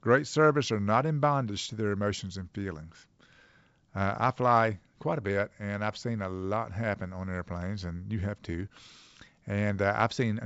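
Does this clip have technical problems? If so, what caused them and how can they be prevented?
No, there are no technical problems in this speech.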